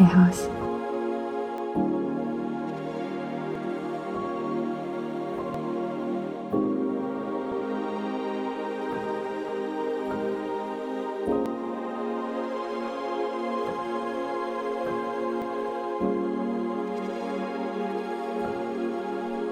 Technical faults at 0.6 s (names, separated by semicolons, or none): none